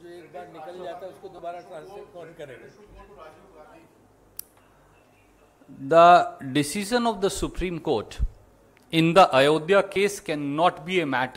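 At 1.38 s and again at 9.95 s, lost LE Audio frames leave 10 ms gaps, each fitting one dropped LC3 frame. The decoder fills each gap with the previous spectrum under random signs, giving a brief noisy blur. On a spectrogram this shows as a thin smeared column, and on the waveform as a short scrambled stretch.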